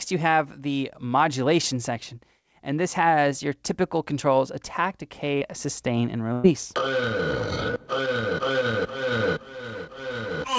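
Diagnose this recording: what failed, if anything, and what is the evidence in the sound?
Short concealed packet loss at 5.38 to 5.43 s, a network fault. About 40 ms of audio arrived too late or not at all, and the receiver bridged roughly 33 ms by extending the preceding sound before crossfading back, heard as a brief smear or wobble.

Burst of packet loss at 6.33 to 6.46 s, also at the network stage. Around 100 ms went missing in a row. Concealment stretched the last sound over about 105 ms with no silence, fading it as a held buzz or hiss, and playback resumed with that stretch skipped. The call path used the G.722 codec, which carries nothing above 8 kHz.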